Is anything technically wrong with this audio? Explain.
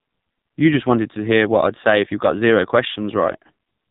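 Yes, there are two faults. The first runs through the whole speech clip: the AMR narrowband mobile codec (AMR-NB), heavily degraded. The audio was reduced to 8 kHz sampling, so nothing above 4 kHz survives. At a low bitrate, which fits the 5.9 kbps mode, the codec rebuilds the voice from a coarse vocal-tract model excited by only a few pulses per subframe. The result is muffled, buzzy and distinctly synthetic.

The second is a lost AMR speech frame at 2.94 to 2.99 s, right after "if you got zero". A single frame of about 20 ms failed its checksum. The decoder covered the gap by repeating the last good pitch and vocal-tract settings at reduced gain. You hear this as a brief dip or warble, and the voice sounds weak or rough for a moment as it recovers.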